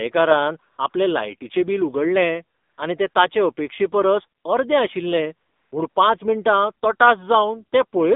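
Throughout, the speech passes through an AMR narrowband mobile codec, whose buzzy, synthetic quality fits a low mode around 7.4 kbps. The line is held to 200 Hz to 3.7 kHz, so everything above is missing, and the vocal-tract modelling damage is plainly audible.

AMR comfort noise appears when the sender judges the talker silent, stops sending speech frames, and the receiver substitutes smooth synthetic noise. This happens at 0.72–0.78 s, 0.90–0.94 s, 2.58–2.78 s, 3.10–3.14 s, 4.40–4.44 s, 5.48–5.72 s and 5.90–5.96 s, where the real background is replaced by a steady hiss that switches in and out.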